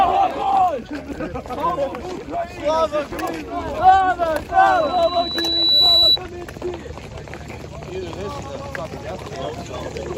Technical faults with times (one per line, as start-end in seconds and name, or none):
4.67-6.18 loudspeaker feedback squeal